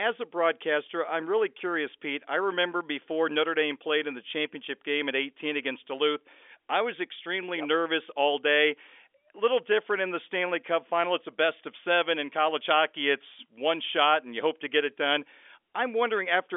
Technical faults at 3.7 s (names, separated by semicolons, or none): none